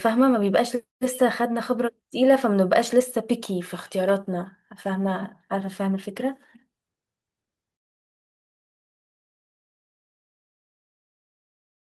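Nothing goes wrong anywhere along this stretch of speech; there's simply no fault to point to.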